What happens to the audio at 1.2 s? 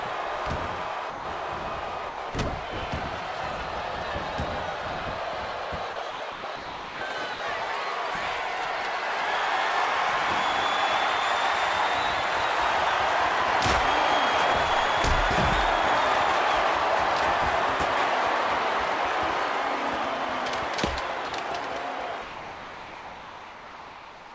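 Around 1.10 to 1.25 s, about 150 ms of sound drops out into flat comfort noise, likely sound dropped by the voice detector misjudging it as background.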